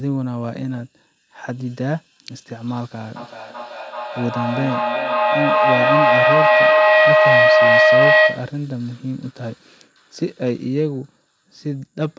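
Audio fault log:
3.16–8.64 s: feedback howl. Two devices share the room, so sound loops back louder each trip, narrowing to a ring near 700 Hz. It repeats roughly every 400 ms and peaks about 9 dB above the speech.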